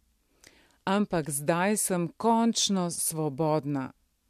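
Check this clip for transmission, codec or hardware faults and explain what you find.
No faults turn up when checking this clip.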